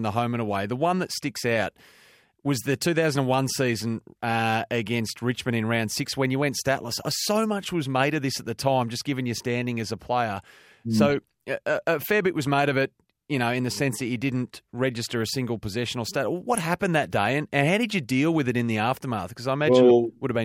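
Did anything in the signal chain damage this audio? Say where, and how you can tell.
Yes. Three brief bursts of noise blips break over the speech: at 4.59 to 4.68 s, at 11.10 to 11.17 s just before "a a fair bit", and at 16.55 to 16.65 s between "single possession or stat" and "that day and and". This is DAB burbling at the codec stage. Weak reception let bit errors slip past error correction into the MP2 data: corrupted samples put short noise blips into single sub-bands, across 3, 5 and 13 frames in the three bursts.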